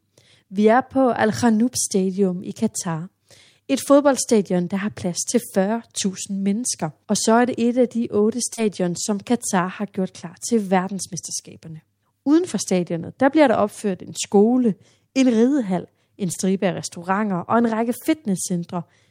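Speech with short concealed packet loss at 8.53 s after "et af de otte" and 16.33 s before "af restauranter og en": roughly 40 and 20 ms lost, smeared over by synthesized continuation.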